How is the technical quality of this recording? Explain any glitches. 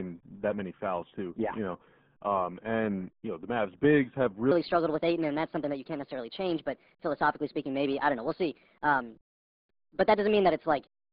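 Technical quality is poor: the whole recording carries heavy low-bitrate codec damage, and the last 6.6 seconds play back too fast.

RealAudio 14.4 codec, throughout: the speech has passed through RealAudio 1 at 8 kbit/s, a dial-up era coder that models the voice crudely and throws away most spectral detail. The usable band runs from roughly 150 Hz to 3.5 kHz, with nothing above 4 kHz. The result is muffled, boxy speech with a gargling, bubbly texture.

Section at the wrong speed, from 4.51 s to the end: playback runs at 1.32 times the original rate, so speed and pitch rise together, by about five semitones. The voice turns noticeably higher and more hurried, with compressed syllable timing and a chipmunk-like tilt, and the shift is abrupt at 4.51 s. The likely cause is a playback or editing stage running this portion against the wrong clock.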